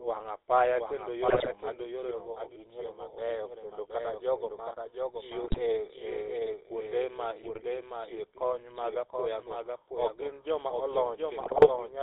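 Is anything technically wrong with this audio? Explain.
Yes, three faults are audible.

Throughout, a clean second copy of the speech trails roughly 0.7 s behind, about 5 dB quieter, with no added room colour. This is a doubled audio track, likely from a second, slower capture path.

Also throughout, the speech sounds buzzy and gravelly and has nothing above 4 kHz. This is the GSM full-rate codec, consistent with 13 kbps, which models the vocal tract and drives it with sparse, regular pulses.

At 1.28–1.49 s, 5.44–5.61 s, 7.44–7.63 s and 11.40–11.70 s, the speech breaks into squawks, pops and gargling. These are GSM bit errors: corrupted filter, pitch or gain values distort the spectrum or level frame by frame.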